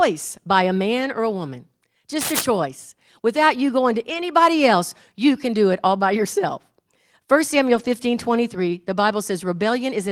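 From 2.21 to 2.45 s, just after "man or a woman", a burst of dense, ragged scratching sits over the speech only slightly below its level. This is cable scratch noise, likely from a worn cable or connector whose contact resistance fluctuated as it moved.

At 4.09 to 4.23 s, between "you going to" and "else you can do", and again at 7.75 to 7.89 s, there is a lost packet rebuilt from error correction. The sound continues without a gap, but about 80 ms turns rough and noisy each time, consistent with four separate packets replaced by their low-bitrate backup copies.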